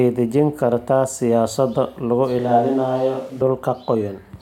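A switch to a distant microphone occurs from 2.39 to 3.41 s, right after "dejin kartaa siyaasado lagu". The speech suddenly turns roomy and hollow, loses bass and drops about 5 dB, with faint room noise now audible roughly 35 dB below the speech. The close microphone's signal likely dropped out, leaving a farther pickup such as a camera microphone to carry the audio, before the close sound snaps back just as abruptly.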